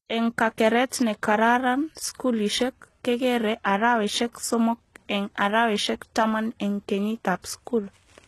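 Throughout the speech, the treble sounds synthetic and nothing reaches above about 12.3 kHz. This is likely HE-AAC compression at a very low bitrate, near 16 kbps. Copied lower bands stand in for the real highs. S sounds come out gritty and lispy.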